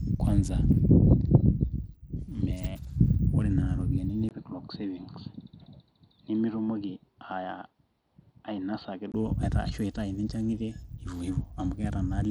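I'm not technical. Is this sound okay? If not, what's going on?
No. Bluetooth SBC compression, throughout: the speech sounds gritty and its treble flickers, likely from a Bluetooth link that squeezes the audio and starves the highest frequencies of data.

Input switched to a poorer device, from 4.29 to 9.14 s: after a tiny gap the speech turns dull, a little quieter and faintly hissy, likely a change to a weaker microphone, then clears again.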